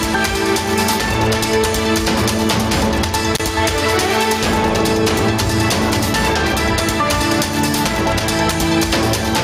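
Input gain set far too high, likely forcing a fast limiter to clamp down on every loud moment, causes gain pumping across the whole audio: the level swings by about 5 dB under each peak, squashing the dynamics. An intermittent contact, a loose cable or plug briefly opening, cuts the signal from 3.34 to 3.41 s, with a dropout of roughly 32 ms framed by crackle at its edges.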